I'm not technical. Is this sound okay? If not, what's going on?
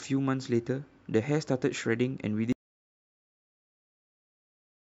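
No, not quite. At about 2.53 seconds the speech just stops and the rest of the clip is dead silence, not even background hiss. That's an audio dropout to silence, most likely the mic or its connection cutting out while recording carried on.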